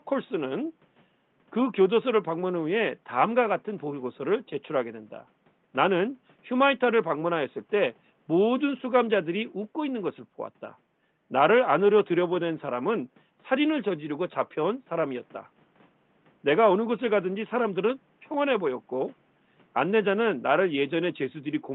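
Nothing goes wrong technically in this recording; the only thing under the speech is some room noise sitting about 38 dB below it, which comes from the space the microphone was in rather than from the system.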